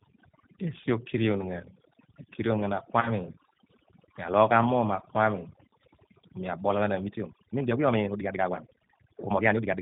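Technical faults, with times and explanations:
Throughout: overdone noise removal. The suppressor cut every band near its noise estimate, quiet parts of the speech included, leaving a near-silent background with twinkling specks. A spectrogram shows black gaps between words scattered with isolated bright dots.
Throughout: G.729 codec. The speech is rebuilt at 8 kbit/s from a vocal tract filter, pitch predictor and a few pulses per frame, so it sounds rough and synthetic. Nothing reaches above 4 kHz, giving a flat ceiling on the spectrogram with blocky, smeared harmonics.
3.01–3.11 s: VoIP packet loss concealed by the speech codec. Right after "ghan mi akirion ghan", about 20 ms of sound, which fits a single lost packet, went missing. The decoder stretched its last pitch and filter into a fading buzz or coloured noise, and the speech stays weak for a moment after. On a spectrogram the harmonics turn rigidly repetitive and dim, and the waveform shrinks.
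6.98–9.82 s: time-stretched section. From "ku mi abol ghan" to the end, the pace jumps to 1.77 times speed while the pitch stays put, most likely from stretching software dropping short pieces to squeeze the audio. It sounds rushed. The spectrogram shows compressed syllables with small seams where pieces were cut.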